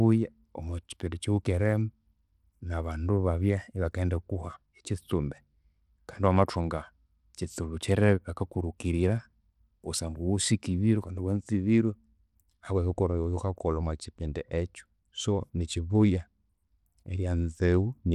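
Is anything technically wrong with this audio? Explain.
Yes. Bluetooth SBC compression, likely the cause, runs through the whole speech clip and is plainly audible. The codec splits the signal into frequency sub-bands and shares out a small bit budget with no real model of hearing. The weaker upper bands get too few bits, and the rest are coarsely quantised. The top end thins and flickers, and a gritty, aliased roughness rides on the speech, which points to a bitrate of about 96 kbps.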